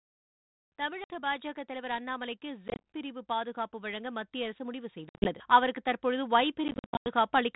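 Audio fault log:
0.76 to 7.5 s, automatic gain rising: the call's automatic gain control judged the input too quiet and kept lifting its gain, by about 14 dB overall. Because the gain acts on everything the microphone picks up, the speech and the background noise swell together, slowly rather than in a jump. The level keeps creeping up across almost the whole clip instead of settling.
1.04 to 1.11 s, 2.68 to 2.81 s, 5.09 to 5.35 s and 6.68 to 7.07 s, packet loss on an ADPCM call: packets went missing and were filled with silence. The first gap is a single 60 ms hole. The later ones are scattered dropouts: 90 ms lost over 160 ms, 120 ms over 160 ms, and 270 ms over 380 ms, with runs up to 90 ms. These get worse and longer through the clip. After each hole the decoder's adaptive predictor and step size no longer match the sender's, so the speech comes back with brief, slight distortion before it settles.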